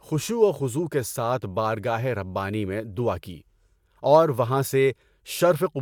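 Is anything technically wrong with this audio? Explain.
No, nothing technically wrong stood out on listening to this speech clip.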